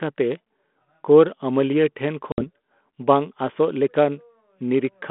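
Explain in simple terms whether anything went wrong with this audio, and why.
Packet loss on an ADPCM call hit this speech at 2.32 to 2.44 s: a few packets, about 60 ms of audio, never arrived. The gap comes out as a sudden silent hole, and because the receiving decoder briefly loses track of the sound's level, the speech returns with a click or slight roughness before settling.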